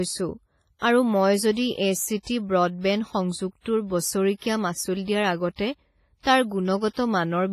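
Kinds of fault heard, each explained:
WMA compression: likely low-bitrate transform coding, around 24 kbps, smearing ringing, washy noise around the speech, with nothing above 15.4 kHz; spectrograms show a hard ceiling and blurred, patchy bands.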